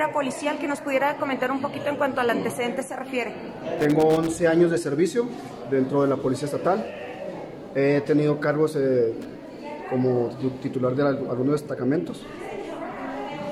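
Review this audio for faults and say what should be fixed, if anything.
Loose connector crackle appears from 3.78 to 4.27 s and again from 9.21 to 9.30 s. A worn or dirty contact is making and breaking as it moves. This chops the signal into irregular scratchy bursts. Clean or replace the connector and secure the cable.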